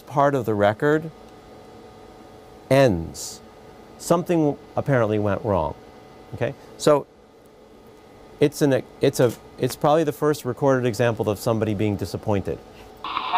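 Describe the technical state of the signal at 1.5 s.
At 1.5 s the signal plays through cleanly, with no dropout, distortion, glitch or other technical fault at that point.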